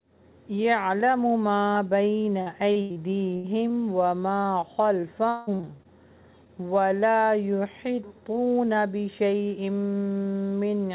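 From 2.42 to 6.50 s there is repeated packet loss, giving a robotic sound. Chunks of audio keep failing to arrive. Each hole is covered by stretching out the last received sound, then another hole soon follows. About seventeen dropouts are heard, the longest about 183 ms. Roughly 0.65 s is patched over in all, about 16% of the stretch. It sounds choppy, with pieces missing. The band stops at 4 kHz throughout, which fits a G.711 telephone codec.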